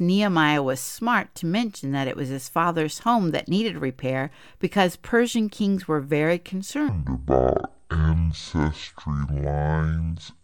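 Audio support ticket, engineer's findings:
Section at the wrong speed, 6.89 s to end: speech drops to half speed, roughly ten semitones deep and dragging. Likely a playback or edit stage running on the wrong clock.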